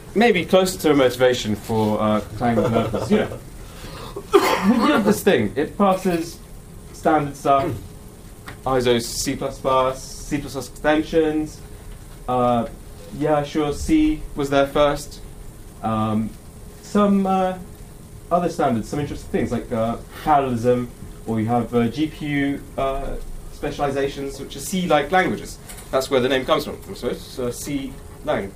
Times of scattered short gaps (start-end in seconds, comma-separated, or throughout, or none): none